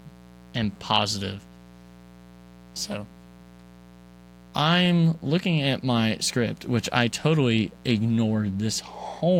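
From start to finish, a mains buzz sits under the speech, around 25 dB below it. It is locked to a 60 Hz supply: sharp switching spikes, of the kind a dimmer, rectifier or poorly shielded cable lets in, arrive twice per cycle and spread harmonics up into the several-kHz range. That is what separates it from plain hum, which stays a smooth, low 60 Hz tone. Here the sound is a steady, raspy edge that doesn't change between phrases.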